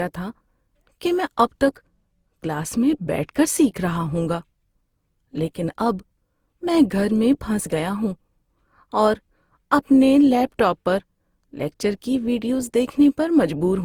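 From the start and through the whole speech clip, the sound is swirly, smeared and hollow, with softened consonant attacks and content ending near 20.2 kHz. This is likely generation loss: repeated lossy coding, consistent with around four Opus passes at roughly 48 kbit/s, each requantising on a shifted frame grid.

From 1.64 to 3.74 s, channel delay (comb filtering) appears. One channel lags by about a single sample, roughly 0.02 ms, and the mono sum cancels near 20 kHz. Because the first notch sits that high, the effect is a slight dulling of the extreme top.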